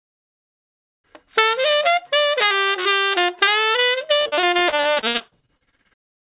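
From 4.16 s to 6.21 s the audio breaks up with repeated packet loss, giving a choppy, robotic sound. Over these two seconds, more than two dozen short holes appear in quick succession, the longest about 59 ms. Each is patched by extending the preceding sound, so roughly a third of the stretch is synthetic fill. The sound turns broken, with pieces audibly missing. Throughout, the call-path band limit leaves nothing above 4 kHz, which fits G.711.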